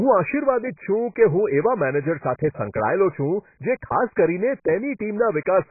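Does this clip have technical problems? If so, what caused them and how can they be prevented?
Yes. All the way through, the speech sounds dull and smeared, with nothing above 2.5 kHz and a warbly, fizzy edge on sibilants. That's likely heavy AAC compression: the encoder drops the top band and thins what's left, which fits AAC-LC at around 12 kbps. To prevent it, encode at a higher bitrate, or keep an uncompressed master and export from that.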